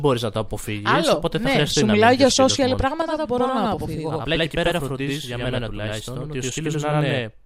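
Channel delay (doubling) begins at 3.02 s, right after "να μιλάω για social", and lasts to the end of the clip. One channel falls behind the other by about 85 ms, which fits a 4096-sample buffer, and the two are then summed to mono. Because the lag is too long to blend, the late copy stands apart at equal level, so each syllable is followed by a distinct slap echo, giving the speech a doubled, stuttering quality.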